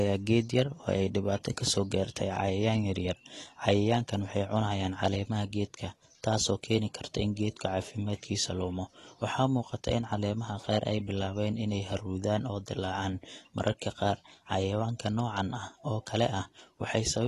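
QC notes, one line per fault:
Throughout, AAC compression: the speech sounds dull and smeared, with a warbly, fizzy edge on sibilants, and there's nothing above 12.1 kHz. That's likely AAC-LC starving the upper bands, which fits a low bitrate around 32 kbps.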